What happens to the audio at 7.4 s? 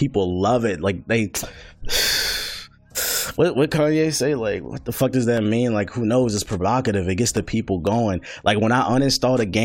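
At 7.4 s the speech carries a small regular tick, part of a series repeating every 0.5 s from 5.37 to 7.87 s. These are periodic USB or driver dropouts: something blocks the audio path at a fixed interval, dropping about half a millisecond of signal to silence each time.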